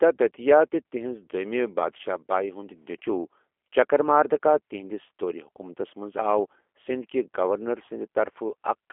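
Throughout, the speech carries G.729 codec damage that is plainly audible, with the rough, slightly synthetic texture of a low-rate model-based coder consistent with about 8 kbit/s. The line band runs from 300 Hz to 3.4 kHz, removing low warmth and upper sibilance.

From 1.97 to 2.01 s, VoIP packet loss concealed by the speech codec: about 20 ms of audio, consistent with one lost packet, is replaced by the decoder repeating its last pitch and filter at falling gain. This stretches the sound into a brief fading buzzy tone or coloured noise, and the voice stays weak or distorted until the frames rebuild.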